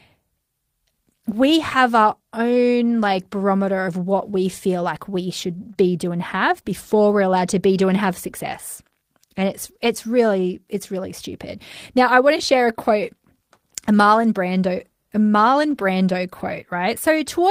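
Speech, with lost packets around 5.49–5.71 s, 5.77–5.79 s (just before "be do and have") and 15.71–15.77 s (after "a marlon brando a") rebuilt from error correction: the decoder played low-bitrate copies, so those stretches turn rougher and noisier without a gap. Between 5.73 and 5.77 s, after "we feel like we", a short concealed packet loss left a hole that the decoder filled by extending the preceding sound, heard as a brief smear.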